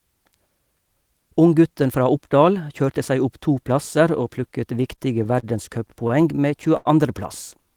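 From 4.83 to 5.45 s the speech hits repeated stalls (stutter): four short gaps, about 67 ms in all, the longest 33 ms, where the jitter buffer ran dry and the receiver stretched the last sound to cover. It happens again from 6.08 to 6.87 s, five gaps totalling about 129 ms, one of them 86 ms, so that stretch drags and hiccups more. Nothing's actually missing; it just stumbles along.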